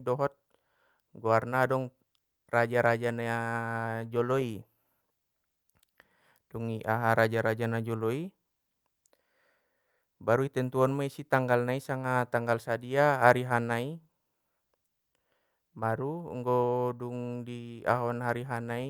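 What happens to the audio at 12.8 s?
At 12.8 s the speech carries on without any audible fault.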